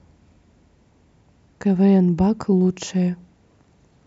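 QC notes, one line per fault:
No fault found.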